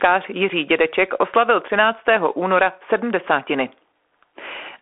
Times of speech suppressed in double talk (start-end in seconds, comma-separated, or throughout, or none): none